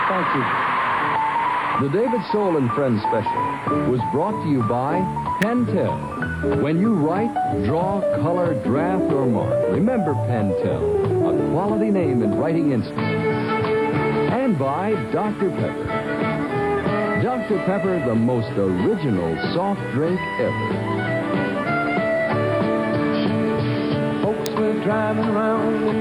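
A nearby switch, motor or static discharge likely arced and was picked up on the audio line, producing an electrical switching spike at 5.42 s and another at 24.46 s. Each lands as a sharp snap or tight cluster of clicks sitting on top of the sound rather than disturbing it, over within about 10 ms. The first peaks at about -10 dBFS, and the second is the louder of the two at about -5 dBFS.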